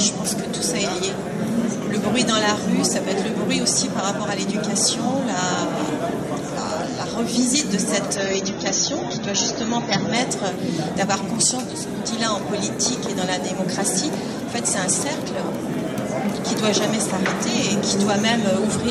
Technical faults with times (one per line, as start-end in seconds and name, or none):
8.15-10.15 adaptive stream at a lower bitrate